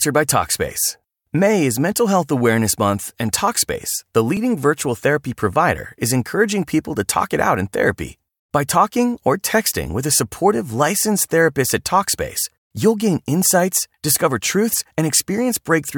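At 4.37 s, just before "virtual therapy provider is", fresh audio failed to reach the output in time, so a repeated buffer occurred: the last 1.45 ms piece played once more. Such a tiny repeat, which fits a 64-sample buffer, loses essentially nothing and is heard as a brief click.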